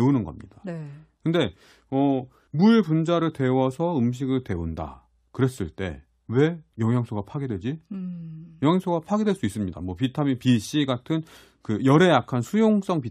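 Nothing here needs flagging: it's a speech recording, and there's no technical fault to point to anywhere in it.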